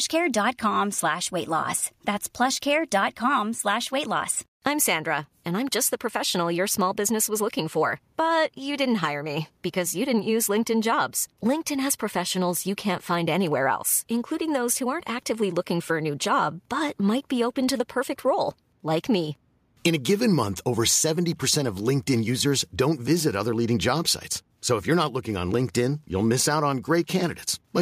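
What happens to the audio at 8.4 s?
Nothing goes wrong at 8.4 s; the speech carries on intact through that moment with no audible fault.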